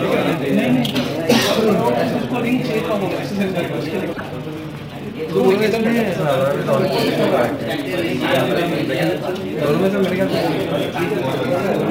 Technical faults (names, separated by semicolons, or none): sample clock jitter; damaged data in a compressed stream